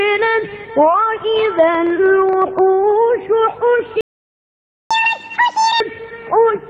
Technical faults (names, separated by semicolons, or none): train of clicks; playback stall; catch-up at higher speed